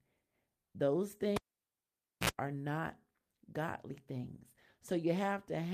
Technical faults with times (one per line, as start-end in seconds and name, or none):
1.36-2.30 cable pulled and plugged in